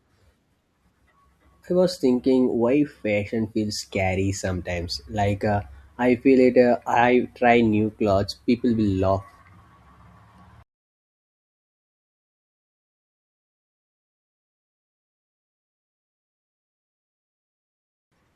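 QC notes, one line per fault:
No technical faults are audible anywhere in the speech; the signal keeps a steady level and unbroken continuity from beginning to end.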